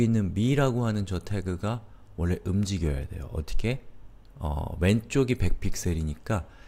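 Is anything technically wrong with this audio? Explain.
Yes. From 0.51 s to 6.66 s there are clock slip clicks: faint, evenly spaced ticks about every 0.4 s, roughly fifteen in all. Each is a single sample dropped or repeated, most likely because two devices were running on unsynchronised clocks, differing by something on the order of 50 ppm, so the offset kept accumulating into whole-sample jumps. The ticks stand out most on louder, sustained passages.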